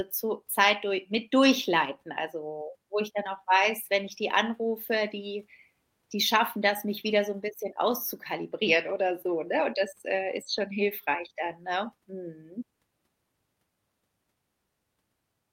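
A recording of speech with no technical fault to report. Nothing in it calls for a time, a cause or a correction.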